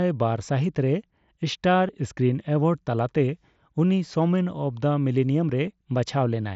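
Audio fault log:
1.88 s and 5.67 s, concealed Bluetooth headset packet loss: a single headset voice packet of about 7.5 ms went missing and the receiver filled it by repeating recent waveform, so each gap is nearly hidden.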